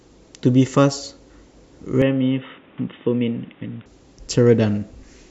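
At about 2.02 s the speech suddenly goes dull and boxy, with nothing left above 3.8 kHz, and it drops a few dB in level. A faint new background hiss comes in well beneath it. There's no gap at the change. It sounds like the input switched to a poorer device, likely a different mic or a headset's call profile taking over, and then switching back at 3.86 s, when the full, brighter sound returns.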